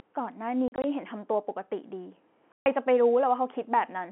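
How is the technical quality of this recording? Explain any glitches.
Two audible dropouts, caused by packet loss filled with silence, break up the narrowband G.711 telephone-line audio.

Packet loss filled with silence: from 0.68 to 0.84 s, about 80 ms of scattered gaps, and from 2.52 to 2.66 s, a 140 ms hole. Missing packets were replaced by silence in steps that fit 20 ms packets, producing hard-edged cut-outs.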